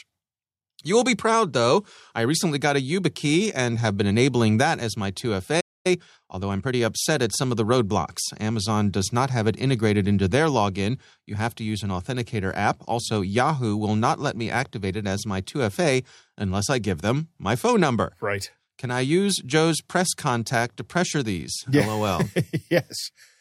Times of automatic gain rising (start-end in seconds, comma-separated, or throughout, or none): none